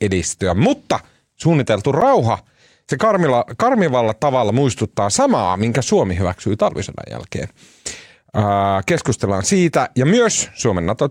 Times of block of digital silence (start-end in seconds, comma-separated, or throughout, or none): 2.01